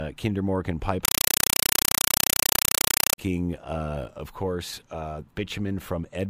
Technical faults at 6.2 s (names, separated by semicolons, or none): none